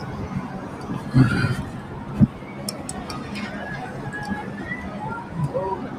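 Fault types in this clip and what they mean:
Noise suppressor applied to music or sounds: a speech-oriented noise reducer stays active for the whole clip, treating sustained tones, ambience and reverberant decay as noise to be removed. Onsets pass largely intact, but held material and tails are pulled down by roughly 5 dB, so the level pumps and the texture thins. On a spectrogram, sustained partials and decay tails fade or flicker between frames; the waveform shows envelopes dipping unnaturally soon after each attack.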